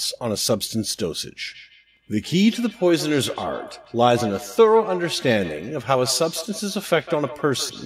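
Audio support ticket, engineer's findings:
Feedback echo between two devices, 1.46 s to end of clip. Speech returns at a fixed interval, roughly every 150 ms, thinner and ringing. Loudest repeats about 14 dB below the speech. Second device in the room replays what the first device's microphone sent. That microphone picks it up again.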